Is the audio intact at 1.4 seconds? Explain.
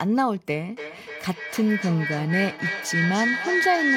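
No. At 1.4 seconds the clip is in the middle of a feedback howl that starts at 0.69 s and runs to the end. A microphone and loudspeaker are coupled in a loop that adds gain on each pass, so each repeat comes back louder and narrower. The result is a ringing tone around 2 kHz, built from repeats about 0.3 s apart, that peaks at about 2 dB below the speech.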